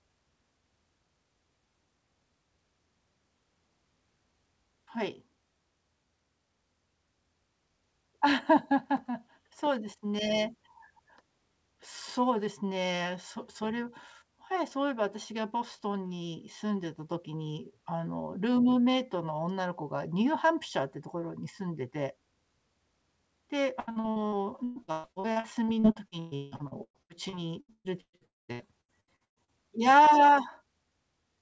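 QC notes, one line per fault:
23.80–29.51 s, repeated packet loss (robotic sound): packets kept going missing or arriving late across this stretch, over thirty holes in under six seconds, the longest about 162 ms. The receiver bridged each one by stretching the last bit of sound, so about 38% of the span is patched rather than real. The speech turns choppy, with pieces audibly absent.
28.25–28.51 s, long network dropout: inside that run, incoming audio most likely stopped entirely for about a quarter of a second. The last sound is carried on briefly as a fading buzz or hiss, then roughly 0.19 s of near-silence follows before the speech resumes further along, with around 240 ms of the original never heard. It sits within the 8 kHz-limited G.722 call audio.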